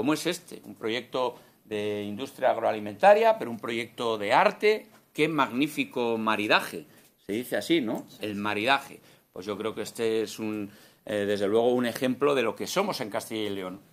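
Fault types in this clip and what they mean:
There are no fault types in this clip.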